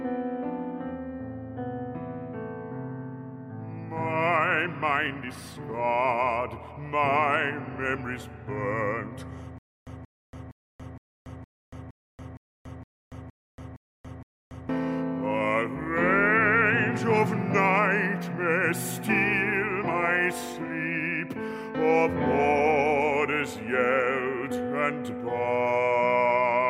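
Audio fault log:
9.58 to 14.69 s, stutter with silent gaps: a 181 ms burst repeats 11 times, each followed by 283 ms of silence. This is likely a stalled stream replaying its last fragment.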